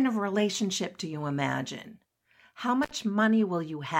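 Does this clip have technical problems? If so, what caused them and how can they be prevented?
Yes. An intermittent contact at 2.83–2.91 s cuts the speech for about 61 ms, and the crackle at both edges marks it as a loose connection rather than a clean digital dropout. Securing or replacing the loose cable and plug prevents it.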